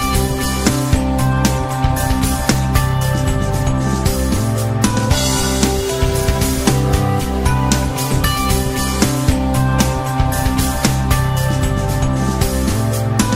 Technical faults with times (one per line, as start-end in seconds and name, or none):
none